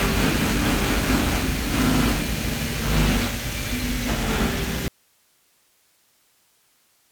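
At 4.88 s the sound cuts off abruptly and never returns, leaving only faint hiss far below the signal: an audio dropout to a faint residue, likely from signal loss while the path stayed live.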